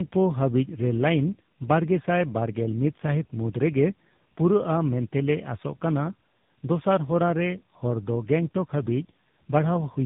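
From start to finish the speech shows tandem speech coding. It passed through two speech codecs in a row, which fits a GSM full-rate leg and then AMR-NB. Each re-coded the last one's errors. Nothing survives above 3.8 kHz, leaving it muffled, rough and warbly.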